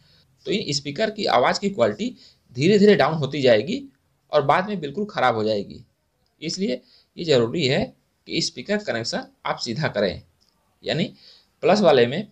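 At 7.81 to 7.83 s, lost LE Audio frames, which fits two missing frames, about 15 ms of audio: the decoder refilled the gap with the previous spectrum under random signs, heard as a brief noisy smear. A spectrogram shows a short smeared column; the waveform, noise-like texture.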